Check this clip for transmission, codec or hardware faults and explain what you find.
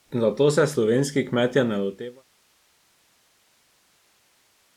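Nothing in this speech suggests anything went wrong along the way, and the only real change is a gentle editor's fade-out that begins around a second and a half in and has the level fully down by 2.25 s, with no click or hard edge.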